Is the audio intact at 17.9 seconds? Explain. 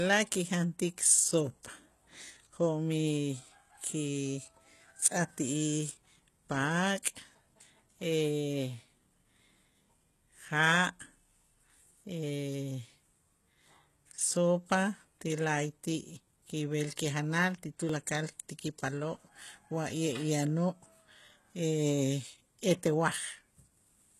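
No. At 17.89 s the recorder likely lost about 10 ms of audio while closing one chunk and opening the next, which fits chunks roughly 6 seconds long. This is audio missing between chunks. The two sides are joined with no silence, so the speech skips forward in a brief jump.

Across this moment and the whole clip, the treble is likely rebuilt by HE-AAC compression at a rate that fits about 16 kbps. Only the lower spectrum is coded and the highs are copied upward, ending near 12.3 kHz, so s sounds turn gritty and metallic.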